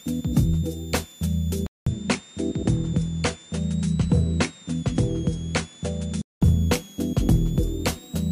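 A switching supply whistle runs through the whole clip. It is a thin, high tone near 4 kHz, wandering between about 3.3 and 3.9 kHz. It sits around 25 dB below the sound. A power supply whining in burst mode makes exactly this drifting pitch.

From 1.67 s to 6.42 s, the sound turns duller. Nothing is left above 10.5 kHz. New background noise appears, about 35 dB down. The level barely changes. A 200 ms silence marks the switch. The input was likely switched to a poorer device.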